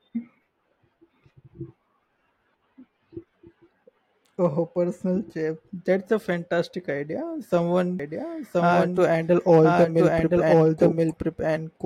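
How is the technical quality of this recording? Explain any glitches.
The speech has one clear fault, a doubled audio track. It begins abruptly at 8.0 s and runs to the end. A second copy of the speech enters at about the same level as the original, trailing by roughly one second. The copy is full-band and dry, with no decay or room colour. The likely cause is the same signal being captured twice, once through a slower path, so two out-of-step copies overlap and muddle the speech.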